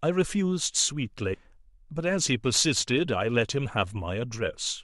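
At 1.33–1.35 s, compressed frames skipped: the speech jumps ahead about a tenth of a second, roughly five 23.2 ms frames, leaving a visible spectrogram discontinuity.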